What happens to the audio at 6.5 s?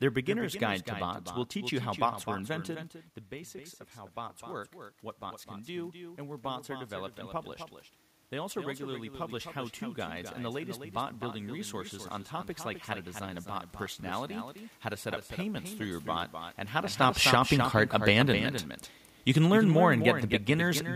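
At 6.5 s the sound is in the middle of an automatic gain rise running from 5.19 to 7.47 s. The input had dropped by about 12 dB, so the automatic gain control lifted its gain slowly by about 3 dB, and the speech and room background swell together.

A doubled audio track also runs through this moment, as it does across the whole clip. A second, full-band copy of the same speech trails roughly a third of a second behind, around 10 dB quieter, with no decay or room colour, likely from a slower second capture path or a misaligned edit.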